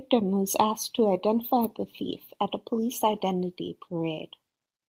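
A speech clip with a lost packet rebuilt from error correction between 2.09 and 2.15 s, after "asked to identify the" and before "at a police identity". There is no gap. The patch sounds briefly rougher and noisier because the next packet's low-bitrate copy filled in about 40 ms, which fits two 20 ms packets. A spectrogram shows smeared, grainy harmonics there, while the waveform stays continuous.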